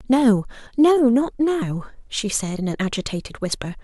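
At 3.52 s the speech skips forward: roughly 50 ms of sound is missing and the two sides butt together with no gap. This is audio missing between chunks, likely from a recorder handing over between blocks of about 1.0 s.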